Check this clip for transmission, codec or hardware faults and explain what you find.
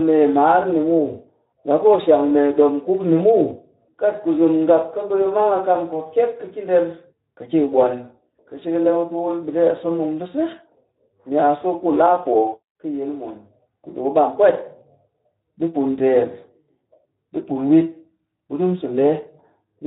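One codec fault runs through the whole clip. Speex codec artefacts throughout: the CELP coder has too few excitation bits, leaving the speech plainly hoarse and noisy, consistent with roughly 11 kbps.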